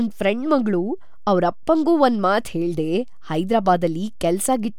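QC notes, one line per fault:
Throughout: DC offset. There is nothing to hear as such, since the speech sounds no different. The whole waveform sits shifted away from zero by a constant amount, which uses up headroom on one side and shows as steady energy at the very bottom of the spectrum.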